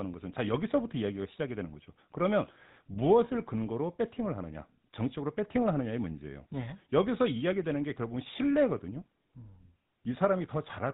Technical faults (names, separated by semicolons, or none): GSM full-rate codec